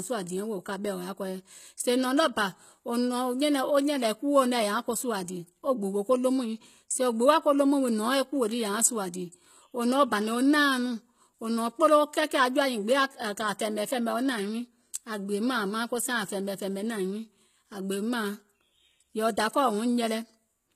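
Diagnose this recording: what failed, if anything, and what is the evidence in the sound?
Codec stage. Throughout, s sounds turn gritty and nothing exceeds 14.9 kHz. Likely HE-AAC compression. It rebuilds treble from copied lower bands, which fits about 20 kbps.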